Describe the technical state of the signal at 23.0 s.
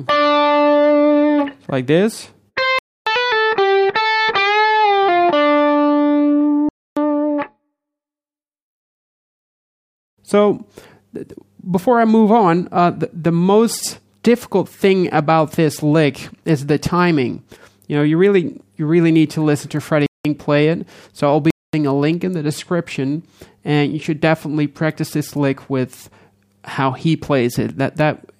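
At 23.0 s the signal is intact, with no audible fault at that moment.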